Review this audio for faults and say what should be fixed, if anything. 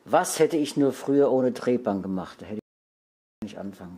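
The input feed most likely dropped out, through a lost connection or a stray mute, while recording carried on writing silence. This is an audio dropout to silence: from 2.59 to 3.42 s, about 0.83 s, the sound cuts to silence with no room tone, and that content is lost. Secure cables and wireless links, lock mute controls, and monitor input levels live so a lost signal is caught during the take.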